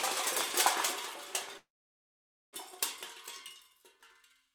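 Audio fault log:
1.57–2.55 s call audio freeze: the last sound fades into 0.88 s of silence, likely a starved jitter buffer; it resumes exactly where it stopped, with nothing skipped, unlike a dropout.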